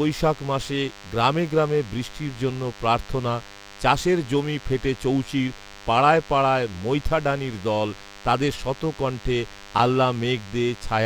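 A nearby DECT cordless phone's 100 Hz radio bursts are being rectified in the audio circuit, laying a thin, steady, harmonic-rich buzz under the speech throughout, roughly 20 dB down.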